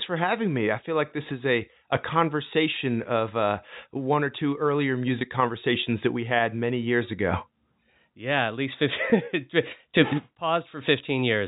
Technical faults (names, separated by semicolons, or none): packet loss with pitch repetition